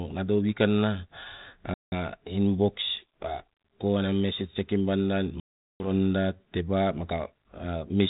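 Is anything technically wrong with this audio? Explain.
Yes. Packet loss on an ADPCM call at 1.74–1.92 s and 5.4–5.9 s cuts out about 180 ms and 400 ms of speech as sudden silence. The 32 kbit/s G.726 decoder's predictor and step size lose step with the sender, so the speech returns slightly distorted before settling.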